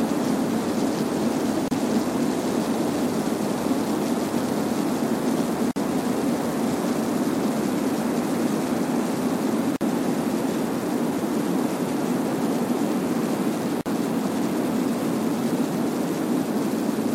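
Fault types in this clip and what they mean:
Gap at a join of encoded pieces: the audio was encoded as separate segments and joined without trimming, so each encoder's start-up delay and final-frame padding remain as silence. Here the sound drops out at 1.68, 5.71, 9.76 and 13.81 s, roughly every 4 s, for about 31 ms and then 49 ms, and resumes where it stopped. The waveform shows a flat stretch with smeared, tapering edges. The spectrogram shows a narrow vertical blank band, smeared at its borders.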